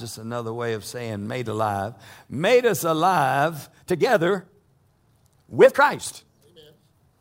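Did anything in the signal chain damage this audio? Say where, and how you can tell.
Yes. From 3.64 s to the end of the clip at 7.21 s, the speech suddenly runs about 1.7 times faster and sounds rushed, yet its pitch does not rise. That combination marks a time-stretched section. It was likely introduced in software at the editing or storage stage, where the tail was squeezed to fit a set length. Pitch is held by discarding short slices of the waveform rather than simply playing it back faster.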